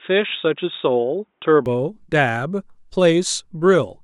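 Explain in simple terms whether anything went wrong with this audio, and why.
For the first 1.66 seconds the speech sounds dull and boxy, with nothing above 3.8 kHz, then it suddenly opens up and sounds clear with no gap. The likely cause is an input switched to a poorer device, such as a headset microphone, before the recording moved to a better one.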